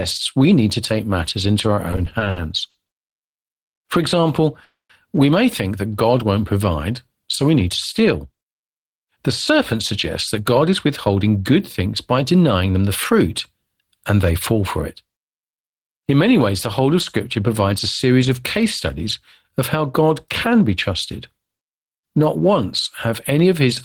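Repeated stalls (stutter) run from 1.91 to 3.19 s. Packets kept arriving too slowly, so the jitter buffer emptied nine times and the receiver stretched the last sound to bridge each wait. That filled 290 ms in total, the longest gap 100 ms. Nothing is lost, but the speech drags and hiccups.

A call audio freeze follows at 4.64 to 4.92 s, likely caused by a 250 ms rise in network delay that starved the buffer. The receiver continued the last sound for 250 ms, fading to silence for 170 ms of it, and then the speech resumed where it had stopped.

Jitter buffer speed-up occurs twice, from 7.69 to 9.74 s at 106% speed and from 10.40 to 12.90 s at 108% speed. After the backlog built up, the receiver trimmed tiny pitch-period slices to cut delay, roughly a tenth and a fifth of a second respectively, so the speech sounds hurried at unchanged pitch.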